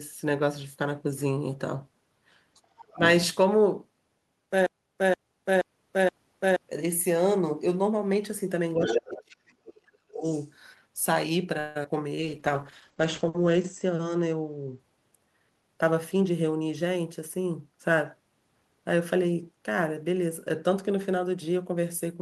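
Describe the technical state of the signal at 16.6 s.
At 16.6 s the speech signal is intact, with no dropout, clipping, glitch or other fault audible at that moment.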